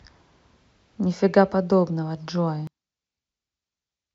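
From 2.67 s to the end, one stereo channel has most likely been flipped in polarity, a case of one channel inverted. When the two channels are summed to mono, the speech, identical and centred in both, cancels against itself and the level drops by about 34 dB. The voice nearly disappears, leaving only a faint residue made of whatever little differs between left and right.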